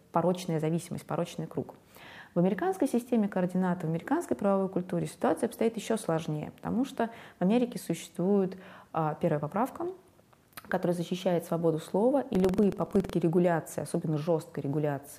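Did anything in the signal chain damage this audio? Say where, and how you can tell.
Yes. Buffer tearing at the driver or buffer stage, from 12.31 to 13.14 s. The write and read positions cross within each period, so a small slice of every buffer replays audio from about a tenth of a second earlier. The hard joins give a 21.5 Hz buzz while sound is present, which fits a 2048-sample buffer.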